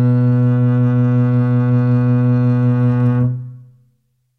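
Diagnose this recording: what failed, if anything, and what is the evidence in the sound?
Nothing failed: the music carries no audible evidence of a fault at any stage of the chain.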